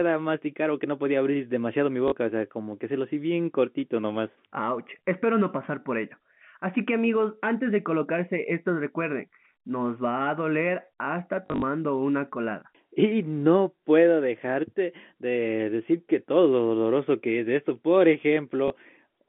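Speech over a telephone-style channel loses packets three times, and each gap is filled by repeating the last good packet, the fault known as packet loss with last packet repeated. The lengths fit 20 ms packets. A 40 ms hole at 2.08 to 2.12 s falls between "podía abrir demasiado mi" and "o sea como que". About 100 ms goes missing in short bursts spread over 11.46 to 11.62 s, just before "una colada", with the longest run 40 ms. A single 20 ms loss sits at 18.68 to 18.70 s. The repeated slice seldom lines up with the pitch cycle, and the 11.46 s cluster buzzes briefly at about 50 Hz, a short robotic stutter. The G.711 A-law line coding, band-limited to roughly 150 Hz to 3.5 kHz, adds at most faint damage of its own.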